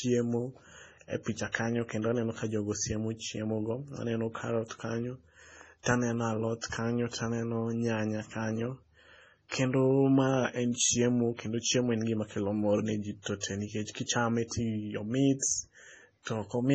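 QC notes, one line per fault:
Throughout: MP3 compression. An MP3 encoder likely starved of bits, at a rate that sounds around 24 kbps, has dropped all content above 8.8 kHz and discarded weak frequency lines that now switch in and out from frame to frame. The speech therefore sounds dull, with a watery, swirling texture. Damage is heavy: sibilants turn into metallic chirps, and consonant onsets smear rather than landing crisply.
1.52 s, 5.83 s, 9.48 s, 13.22 s, 13.40 s, 15.39 s: pre-echo. At each of these moments a sharp onset falls late in a coding block, so quantisation noise sized for the loud attack spills back into the quiet moment before it, spreading roughly 25 to 41 ms ahead. Each attack is preceded by a brief hiss and arrives softened. The first comes after "e picha" and before "kanyo kendo aneno ka", the second before "taneno alot kanyo taneno", and the fifth before "tee nikech kichame".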